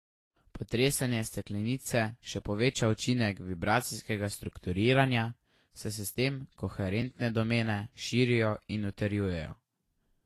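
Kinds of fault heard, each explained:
Vorbis compression: Throughout this speech, nothing is heard above 14.1 kHz, and the treble turns hissy and grainy, with softened consonant attacks. This is likely Vorbis coding at a low rate near 34 kbps. A plain low-pass filter would only sound dull, not noisy.
Repeated buffer: A piece of about 10 ms plays again, giving a brief buzz rather than a gap. From 1.83 to 1.85 s it sounds twice more, just before "še poveča učinek vibracijskega". At 7.02 s it repeats once, before "domene širijo in". Unlike a dropout, no audio is lost.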